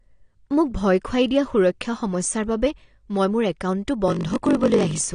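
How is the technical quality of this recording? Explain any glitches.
Technical quality is compromised by two faults, one present throughout and one near the end.

Throughout, the speech is band-limited with nothing above 9.7 kHz and plainly audible codec damage: dullness, smearing and a fizzy, warbling texture on sibilants. This is likely AAC compression, with the quantiser starving the upper bands, which fits a low bitrate around 32 kbps.

From 4.06 s to the end, a block size mismatch (padded) appears. Each block arrives short and is zero-filled, which fits a 1024-sample read size. The inserted gaps produce a 46.9 Hz buzz, and the speech runs slower at 0.938× speed with its timbre unchanged.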